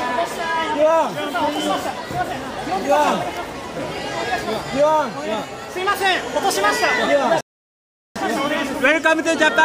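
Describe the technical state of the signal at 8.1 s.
A playback stall runs from 7.41 s to 8.16 s, so at 8.1 s the output is still silent. The sound cuts off mid-flow for about 0.75 s, likely because the player ran short of data or its thread was blocked, until playback recovered.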